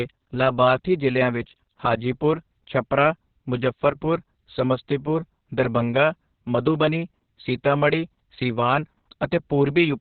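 The speech runs throughout through Opus voice compression in its SILK mode, squeezed to narrowband at what sounds like a very low bitrate, around 6 kbps, so nothing is left above 4.4 kHz. The voice comes out muffled, hoarse and faintly robotic, with heavy coding damage.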